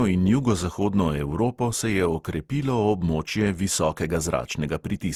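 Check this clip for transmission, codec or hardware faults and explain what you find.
There's one fault, running through the whole clip: generation loss. The speech sounds swirly, hollow and smeared, with blurred attacks, likely from about seven rounds of lossy re-encoding, which fits an Opus chain at around 64 kbit/s.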